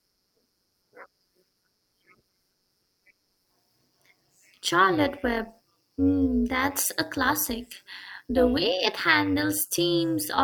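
Overlap-add ripple throughout the speech: frames rejoined with uneven overlap make the level pulse about 11 dB around 200 times a second, a metallic buzz with extra tones around each note rather than pitch wobble.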